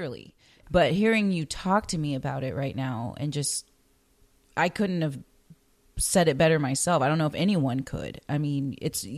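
Speech with no technical faults.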